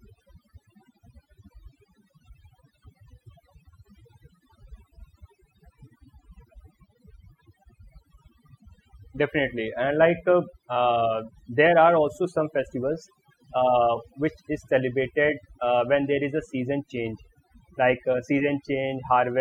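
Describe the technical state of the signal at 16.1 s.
At 16.1 s you're hearing overdone noise removal, and it runs the whole clip. The denoiser was pushed so hard it switches off any frequency band sitting near its noise estimate, so the gaps go eerily silent with twinkly specks, and quiet parts of the speech get removed along with the noise.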